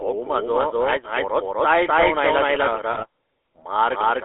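From start to finish the speech is heard twice, with a second, equally loud copy trailing the first by about a third of a second. The echo is dry and full-band, with no room tail or fading, so it sounds like a stuttering overlap rather than reverberation. This is a doubled audio track, most likely caused by the same signal being captured a second time through a slower path, or by an edit that left two copies out of alignment.

Throughout the clip the voice is also buzzy and gravelly, squeezed into a narrow telephone band of roughly 300 Hz to 3.4 kHz with nothing above. This is the GSM full-rate codec at work, and the damage is plainly audible. The codec rebuilds the voice from a vocal-tract model excited by sparse, regularly spaced pulses, and that coarse excitation produces the rasp. The sound fits a 13 kbps full-rate stream.

From 2.92 to 3.04 s the voice breaks up into squawks, pops and gargling for just over a tenth of a second. 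These are GSM bit errors: flipped bits from a weak radio link reached the decoder and corrupted the filter, pitch or gain values, so the spectrum bends and the level jumps from frame to frame. The length of the burst points to about five damaged 20 ms frames.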